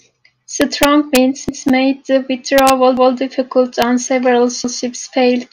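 From 0.62 to 1.17 s the speech hits integer overflow: peaks only about 2 dB past full scale wrap to the opposite sign instead of clipping, so you get harsh cracks. At 1.49 to 1.67 s there's a repeated buffer, a roughly 186 ms chunk playing twice with a hard seam, which fits an 8192-sample buffer, so it reads as a stutter. The overflow cracks return at 2.58 to 2.70 s and as a single snap at 3.82 s, both about 1 dB over. The same stutter comes back at 2.97 to 3.16 s and 4.64 to 4.83 s, with nothing dropped, just doubled.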